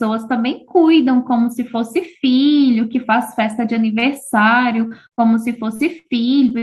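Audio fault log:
3.99 to 4.05 s, short stall from a late packet: a packet turned up late, the jitter buffer ran dry, and the last bit of sound got stretched for about 26 ms until it arrived. Nothing's actually lost, you just hear a brief held, slightly buzzy smear before things pick up where they left off.
4.87 s to the end, repeated packet loss (robotic sound): packets keep dropping out over this stretch, with eight gaps, the longest about 61 ms. Each hole gets papered over by carrying the last sound forward, roughly 14 % of the stretch concealed, so it comes out choppy with chunks missing.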